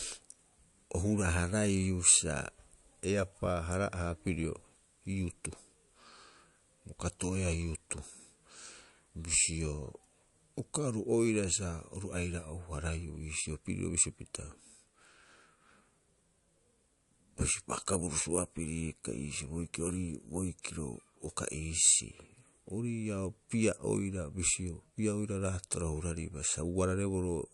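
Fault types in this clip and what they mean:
MP3 compression: the speech has nothing above 11.3 kHz and a plainly audible watery, swirling texture, likely from an MP3 encoder short of bits, which cuts treble at a fixed frequency and drops weak frequency lines frame to frame, consistent with roughly 54 kbps.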